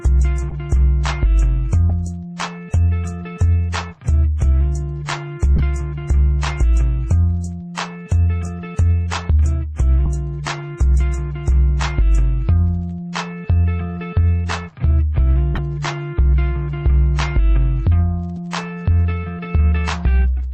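Corrupt frames got decoded at 0.50–0.54, 1.9, 5.56–5.61, 10.06 and 15.54–15.59 s: damaged bits misplaced energy for a frame or few, giving short chirpy blips, the loudest near 5.6 s.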